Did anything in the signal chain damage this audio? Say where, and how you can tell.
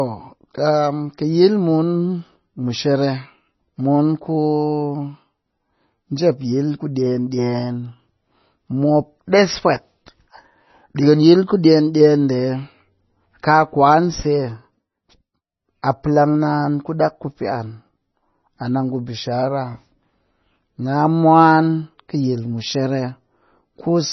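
Yes, at the codec stage. The whole clip sounds watery and swirly, with nothing above 5.9 kHz and heavy damage throughout. That's likely MP3 compression starved of bits, probably around 24 kbps, cutting the treble at a fixed point and dropping weak frequency lines frame to frame.

There's also pre-echo at 15.82 s, a short smear of hiss about 12 ms long just ahead of a sharp attack. The codec spread its quantisation noise across the whole transform block, so noise meant for the loud onset leaks into the quiet moment before it.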